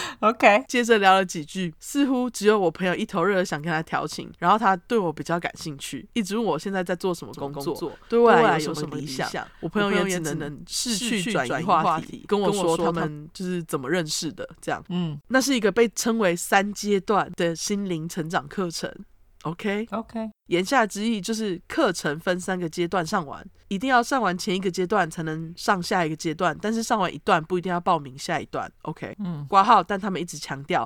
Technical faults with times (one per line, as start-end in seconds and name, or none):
7.34-13.08 doubled audio track